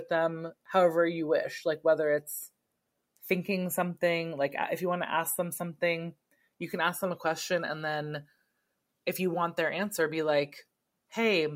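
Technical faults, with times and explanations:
No technical faults are audible anywhere in the recording.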